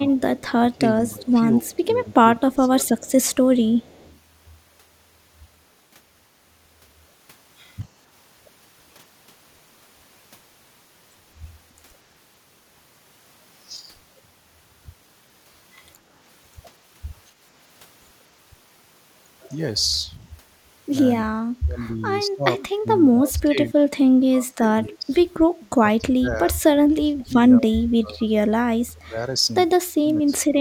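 Speech suppressed in double talk runs from 0.0 to 2.89 s: the speech dips by up to about 15 dB, for roughly a second and a half in total, thinning and breaking up. The likely cause is an echo canceller that, with both ends talking at once, could not separate local speech from loudspeaker echo and attenuated both.

Echo leak overlaps this, at 0.37 to 0.41 s and 1.71 to 1.77 s, then longer from 2.98 to 4.17 s. A faint copy of the speech returns 231 ms late, about 25 dB below the speech at first and about 35 dB below later. The likely cause is a far-end speakerphone whose canceller let part of its microphone pickup through.

Speech suppressed in double talk returns from 21.23 to 25.19 s and from 25.79 to 30.61 s. This time the dips reach about 25 dB, and each stretch loses roughly three seconds of speech in pieces, with the same double-talk attenuation as the likely cause.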